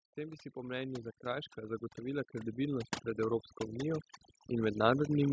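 Overdone noise removal runs throughout, cutting frequency bands near the noise estimate so deeply that the background drops and breaks up into twinkling specks. From 0.05 s to 5.03 s, automatic gain rising lifts the level by about 16 dB, so speech and background swell together steadily, within the call's 8 kHz band.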